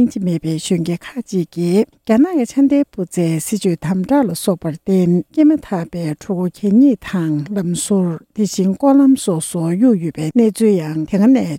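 No technical faults are audible.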